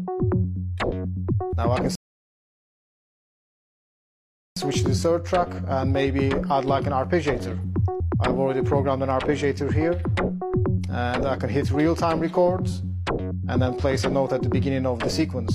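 At 1.95 s the player exhausted its downloaded buffer and halted, causing a rebuffering stall until more data arrived at 4.57 s. The sound drops to silence for about 2.6 s, then picks up exactly where it stopped, with nothing missing but time added.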